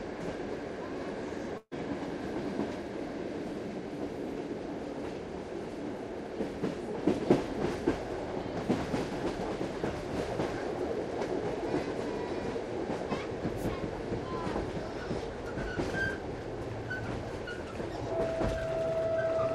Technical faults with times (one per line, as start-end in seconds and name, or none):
1.57-1.73 burst of packet loss